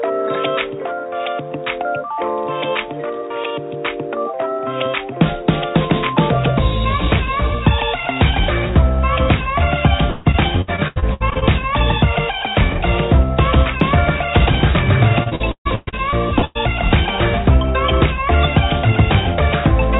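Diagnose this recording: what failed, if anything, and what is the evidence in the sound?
Repeated packet loss (robotic sound) at the network stage, from 10.1 to 11.43 s and 15.23 to 16.57 s. Each stretch is choppy, with pieces missing. Holes up to about 150 ms are patched by stretching the last sound, covering roughly 36 to 40 percent of each span.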